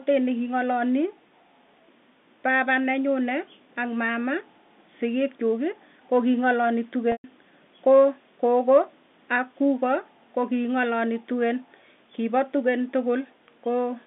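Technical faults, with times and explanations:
7.12–7.24 s, packet loss with pitch repetition: after "koo kinang'alali", about 120 ms drops out, which fits six 20 ms packets. The last pitch period repeats as a brief buzzy hold, fades to silence, then speech cross-fades back. A spectrogram shows frozen harmonic stripes dimming to a blank gap, and the waveform shows identical cycles shrinking into silence.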